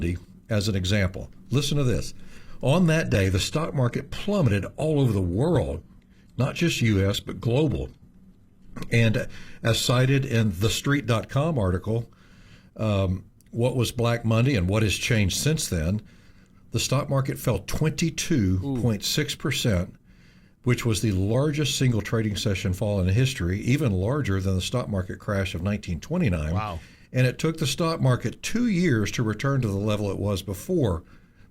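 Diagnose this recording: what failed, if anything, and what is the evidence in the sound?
Network stage: adaptive stream at a lower bitrate. From 3.0 to 11.0 s, speech abruptly turns dull and synthetic without a gap, fitting a low-bitrate HE-AAC rendition.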